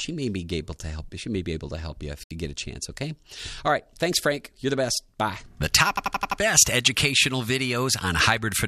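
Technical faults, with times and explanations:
2.23–2.31 s, digital broadcast dropout: the sound cuts to silence for about 72 ms, likely because the receiver muted on lost or corrupted frames, which fits three frames.
5.97–6.40 s, system hang loop: an 85 ms slice repeats exactly five times as a stutter at 11.7 Hz, which fits a frozen system replaying a 4096-sample ring buffer.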